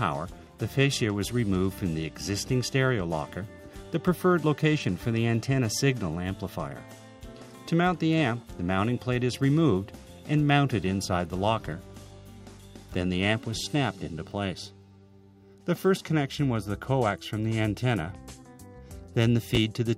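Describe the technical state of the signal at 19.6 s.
At 19.55 to 19.57 s the signal has chunks out of order. One 10 ms block of audio arrived late. It plays one chunk after the block that should have followed it. No audio is missing, but the sequence within those 20 ms is swapped. That leaves three abrupt joins where the waveform does not line up. The result is a brief jumbled flicker in the sound.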